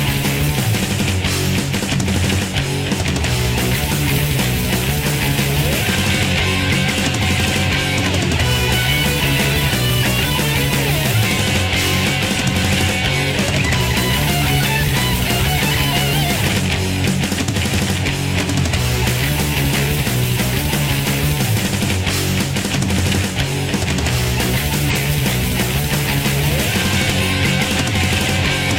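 At 13.75–13.81 s, 24.90–24.96 s and 27.17–27.23 s, compressed frames are skipped. Whole frames never play. The audio jumps ahead, by about 100 ms, then about 150 ms twice. This fits frames near 46 ms.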